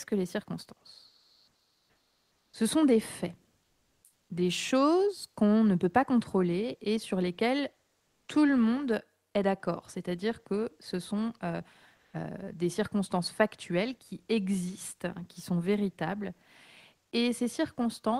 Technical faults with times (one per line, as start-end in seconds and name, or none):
1.07-2.53 comfort noise in place of the background
3.63-4.29 comfort noise in place of the background
8.05-8.27 comfort noise in place of the background
11.95-12.13 comfort noise in place of the background